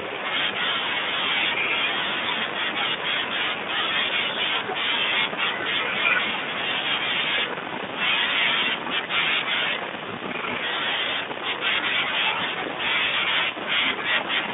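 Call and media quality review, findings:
Brief smear at 13.09–13.15 s. The sound stretches into a buzzy tone or coloured noise that fades, then stays thin and roughened for a moment afterwards. This is VoIP packet loss concealed by the speech codec: about 40 ms missing, consistent with two lost 20 ms frames. The Speex decoder repeats its last pitch and filter at falling gain, and output needs a short spell to settle once packets resume. Speex encoding itself sounds clean or at most faintly coloured on the 150 Hz–3.6 kHz narrowband line.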